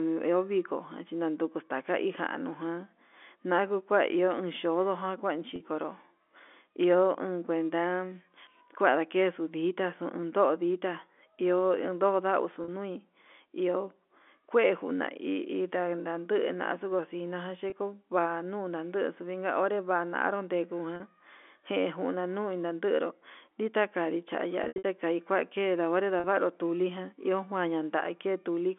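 Packet loss with pitch repetition hits at 5.56, 12.64, 17.70 (between "xuu cosina" and "kua nuu"), 20.96, 24.64 to 24.84 and 26.20 s. Each gap apart from the one at 24.64 s lasts 20 to 40 ms, consistent with one or two 20 ms packets. The receiver repeats the last pitch period, so the telephone-band sound briefly holds with a buzzy edge. At 24.64 s, 160 ms of losses scatter over 200 ms, the longest run 80 ms. That stretch fades toward silence before cross-fading back.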